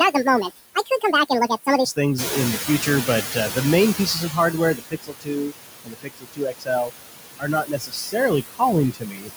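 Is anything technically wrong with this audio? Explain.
Yes. Noise suppressor artifacts run throughout: the suppressor pulls steady noise down by about 20 dB per frame, leaving a residue, visible as flickering specks between speech harmonics.

Noise suppressor catching up, 2.18 to 4.76 s: the room noise jumps by about 11 dB near 2 s, the estimate lags, and noise passes through before sinking over 2.58 s, a fading band.

Speech cut by the noise suppressor at 0.75–1.13, 4.75–5.53, 5.84–6.92, 7.39–8.32, 8.48–8.62 and 8.92–9.31 s: speech mistaken for noise drops up to about 21 dB, sounding swallowed, with holes in the harmonics.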